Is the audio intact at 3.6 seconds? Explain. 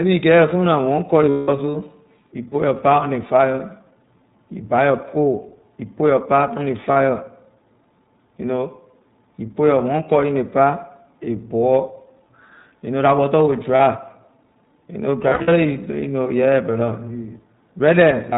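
No. At 3.6 seconds, as throughout the clip, the speech carries iLBC codec damage. iLBC is a narrowband codec that codes each frame's excitation independently of the previous frame, and the character here suggests 20 ms frames at around 15.2 kbps. Nothing above 4 kHz survives, so the speech sounds band-limited and dull. The per-frame coding adds a plainly audible roughness and a slightly synthetic texture.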